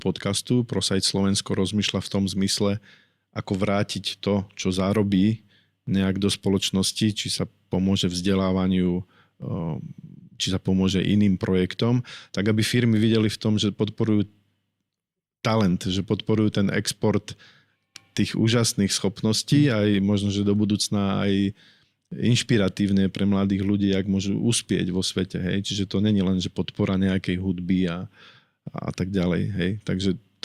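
A speech recording carrying clock slip clicks from 0.17 s to 30.4 s: faint, evenly spaced ticks roughly every 0.15 s, around two hundred in all, that are clearest on louder passages and vanish in pauses. The likely cause is two unsynchronised devices drifting apart by something like 150 ppm, with each tick pointing to a single sample dropped or repeated. Their strict regularity and silence-dependence set them apart from random dropouts or crackle.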